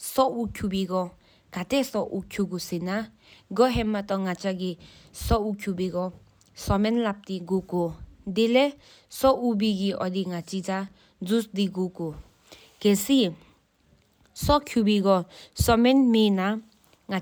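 No technical faults can be heard at any point in the speech.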